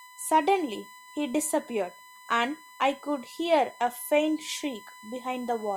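A fixed-pitch whine at 1 kHz sits under the speech for the whole clip, strongest at that fundamental and roughly 20 dB below the speech. This is USB whine: current drawn in the bus's 1 ms frames leaks into the audio through shared power or ground.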